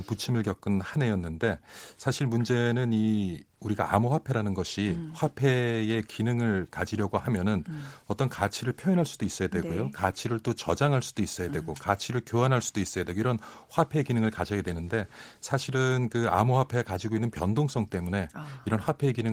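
Nothing stood out on listening to this speech recording; the Opus voice coding carrying it shows only the light softening expected at this rate.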